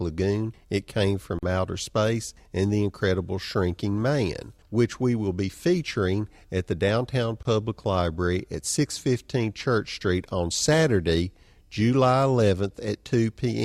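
It's a speech clip with two short dropouts: a gap at a join of encoded pieces, first at 1.39 to 1.43 s (about 41 ms) and again at 7.43 to 7.45 s (about 24 ms). They fall 6 s apart, which points to the audio being encoded in 6-second chunks and stitched together without trimming. The encoder's start-up delay and end-of-chunk padding are left in, so the sound drops out briefly with softened edges and then picks up right where it left off.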